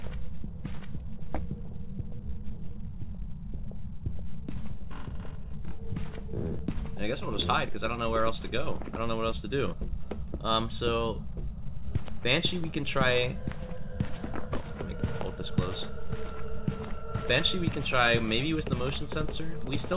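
Nothing stood out on listening; the sound stops at about 4 kHz, which fits the narrowband G.711 codec on the call path it travelled through.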